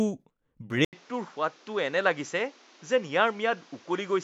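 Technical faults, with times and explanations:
0.85–4.24 s, input switched to a poorer device: after an 80 ms silence the speech loses everything above 7.6 kHz, drops roughly 5 dB and gains a noise floor around 30 dB down, likely because recording moved to a narrower-band microphone with its own tone and noise.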